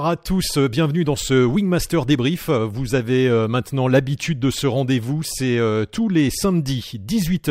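No technical faults are audible.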